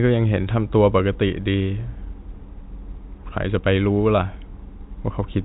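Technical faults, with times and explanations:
No technical faults are audible; the speech is carried over G.711 telephone coding, with nothing passing above 3.8 kHz.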